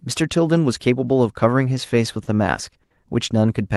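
It's a speech clip with two short stalls from a late packet, at 2.23 to 2.29 s and 2.83 to 2.92 s. Each time the jitter buffer ran dry and the receiver stretched the last sound, for roughly 40 ms and then 70 ms, before carrying on with nothing lost. The rolled-off top around 12 kHz fits an Opus call path.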